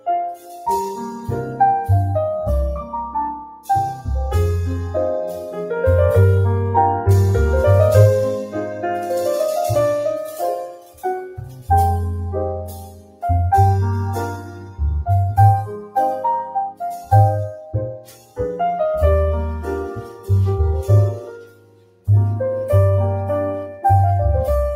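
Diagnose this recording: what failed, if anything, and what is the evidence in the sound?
Noise suppressor applied to music or sounds, throughout the clip: a call-processing stage tuned for speech is treating steady and sustained content as noise. Attenuation rises and falls by roughly 10 dB, so held material pumps and thins while attacks pass.

Sound cut by the noise suppressor at 0.0–0.67, 3.43–3.69, 10.27–11.69, 12.64–13.24, 14.37–14.8, 15.71–18.4, 19.87–22.08 and 23.69–23.84 s. Drops reach about 18 dB, worst near 12.64 and 19.87 s, as the suppressor clamps sustained passages and cuts their decays short.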